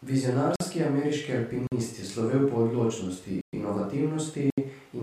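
The speech drops out four times: at 0.56 s and 1.67 s for about 46 ms each, at 3.41 s for 118 ms, and at 4.50 s for 74 ms. Each is a block of digital silence. The samples were replaced by zeros with no fade, so the waveform snaps to silence and back. The first two match a 2048-sample buffer that went unfilled in time.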